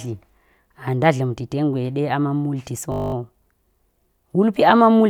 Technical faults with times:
2.92-3.14 system hang loop

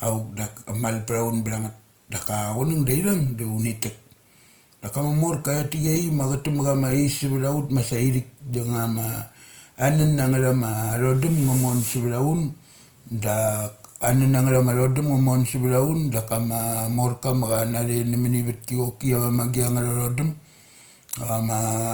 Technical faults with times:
0.00-21.94 Opus compression

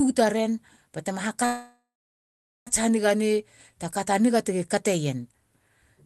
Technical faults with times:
1.45-2.69 call audio freeze

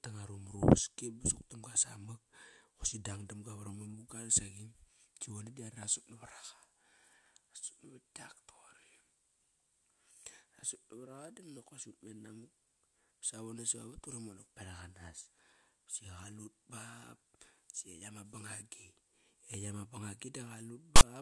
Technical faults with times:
20.96-21.02 file tags played as audio

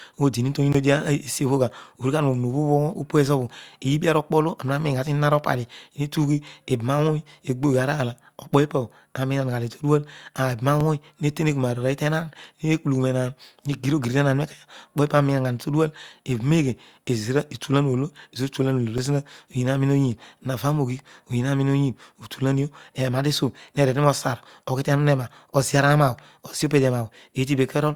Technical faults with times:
0.72-0.74 block of digital silence
10.80 block of digital silence
18.98 block of digital silence

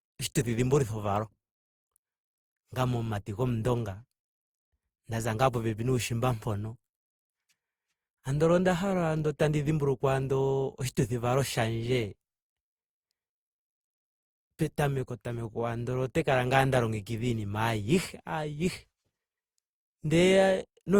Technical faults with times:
0.00-20.99 generation loss

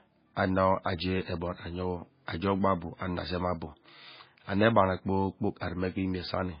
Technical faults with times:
0.00-6.60 MP3 compression

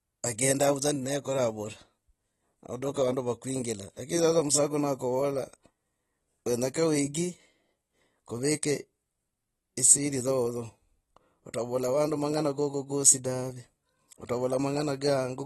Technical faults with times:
0.00-15.46 AAC compression

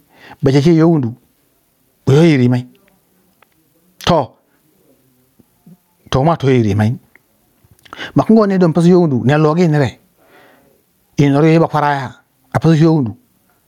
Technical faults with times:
0.00-13.67 gain pumping

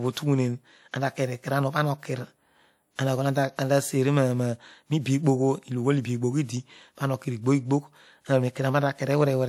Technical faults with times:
2.95-2.99 pre-echo

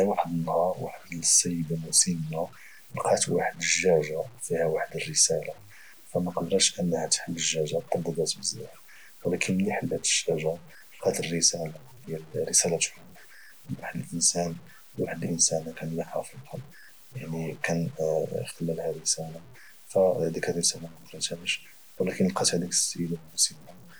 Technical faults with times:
0.00-24.00 low bit depth without dither

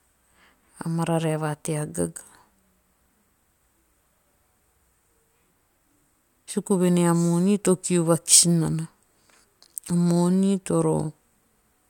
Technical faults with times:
none

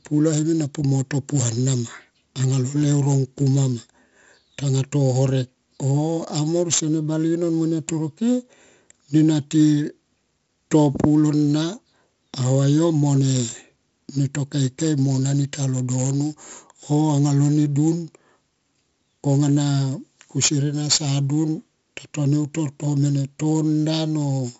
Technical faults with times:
0.00-24.60 4-bit ADPCM compression

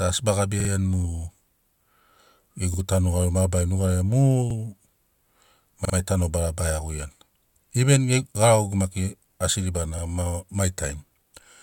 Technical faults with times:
0.60-0.70 repeated buffer
2.74-2.79 repeated buffer
4.50-4.55 repeated buffer
5.85-5.94 repeated buffer
9.98-10.03 repeated buffer

